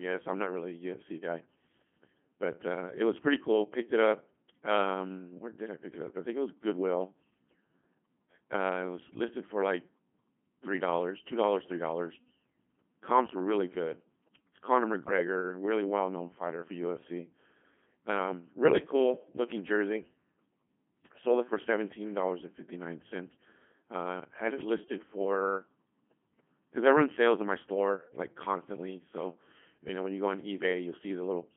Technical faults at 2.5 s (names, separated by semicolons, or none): Codec 2 vocoder